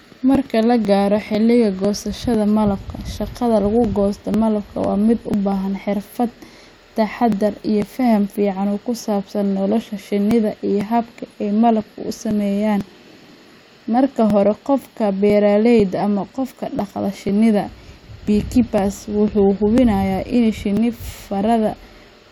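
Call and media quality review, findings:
Regular ticks through the speech, about every 0.5 s, 0.35 s to 22.26 s, around fifty in all. Periodic USB or driver dropouts: a recurring bus or driver stall skips roughly 2 ms of audio each time, leaving a splice click.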